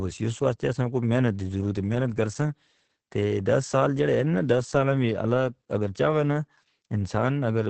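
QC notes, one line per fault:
Throughout, Opus voice compression: the speech sounds muffled, hoarse and faintly robotic, with nothing above 8.6 kHz. The heavy damage fits the SILK linear-prediction coder running wideband at a low rate near 10 kbps, which codes the voice's excitation only coarsely.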